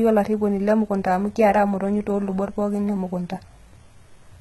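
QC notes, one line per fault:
Throughout, HE-AAC compression: the treble of the speech sounds bright but synthetic, with s sounds gritty, metallic and lispy, and nothing at all above about 11.8 kHz. The likely cause is HE-AAC coding, which keeps only the lower spectrum and rebuilds the top by copying lower bands upward under a coarse envelope. Those copied harmonics don't align with the real ones at the crossover. The heavy damage fits a bitrate around 16 kbps.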